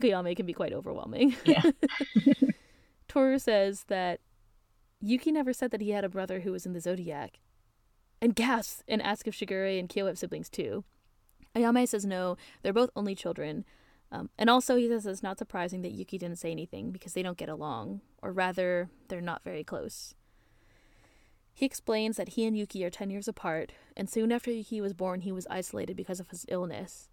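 No technical faults can be heard anywhere in this recording.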